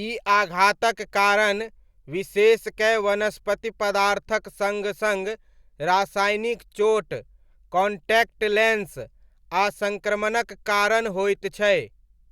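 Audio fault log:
No technical faults can be heard anywhere in the speech signal.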